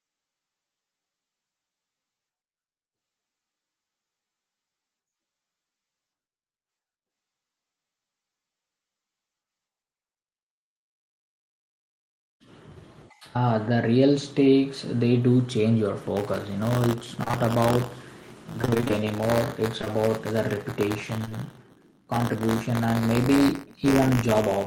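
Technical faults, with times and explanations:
16.16 to 24.67 s, buffer tearing: the writer and reader of the playback ring buffer have slipped, so a small slice of each buffer plays audio about 20 ms stale. The hard joins give a steady 100 Hz rattle, which fits a 10 ms period, and it's heard only while there's signal.
17.23 to 17.35 s and 18.62 to 20.00 s, repeated packet loss (robotic sound): three gaps in the first stretch, nearly half of it patched, then ten gaps of up to 25 ms in the second. Each hole gets filled by extending the last sound, so it turns choppy with pieces missing.
21.25 s and 21.29 to 21.44 s, short concealed packet loss: two back-to-back losses of about 20 ms each. The decoder bridged them by continuing the preceding sound and blending back in, with the second also stretching things by a few milliseconds, so you get a quick smear or wobble.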